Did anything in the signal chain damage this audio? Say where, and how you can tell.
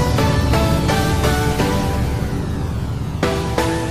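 Yes. From 1.51 s to the end, periodic clock jitter at the converter adds sidebands roughly 100 Hz either side of each component, giving a rough, metallic edge.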